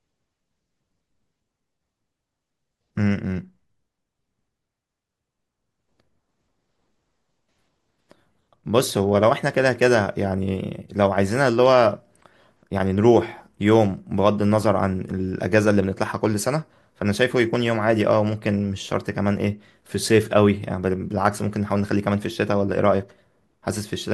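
Nothing in this recording stands out as a technical fault at any point, so there's no problem to describe here.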